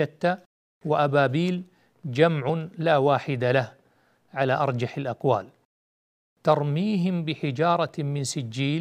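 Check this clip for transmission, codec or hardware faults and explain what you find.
One fault stands out: clock drift buffer slips. From 0.70 s to 7.89 s, about five clicks land in the speech every 1.8 s. The likely cause is two free-running clocks drifting several hundred parts per million apart, so a buffer periodically drops or repeats a few dozen samples. The waveform shows abrupt steps, and the spectrogram shows evenly spaced thin vertical broadband lines.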